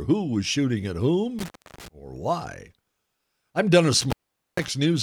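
A loose connection, an intermittent contact, opens twice in this speech: after "shooting at" from 1.39 to 1.88 s, dropping out for 0.30 s, and again from 4.01 to 4.68 s for 0.45 s, each time crackling at the edges and leaving faint hiss.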